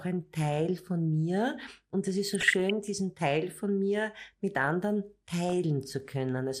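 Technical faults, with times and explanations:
Throughout: MP2 compression. The speech appears to have been carried by MPEG Layer II at a low rate; the plainly audible damage fits roughly 80 kbit/s, which is the likely cause. With so few bits the encoder drops the top sub-bands entirely and coarsely quantises those it keeps. The speech therefore sounds dull and muffled, with a gurgling, grainy roughness as upper bands switch in and out from frame to frame.
2.24–2.70 s and 5.49–5.53 s: DAB burbling. Bit errors, at a rate of a few per thousand, slipped past the error correction and corrupted the MP2 audio data, scrambling samples. Wrong samples put short blips of noise into single sub-bands. The first burst runs for nearly half a second, spread over 23 frames. The second is a brief blip right after "von mir mit anderen".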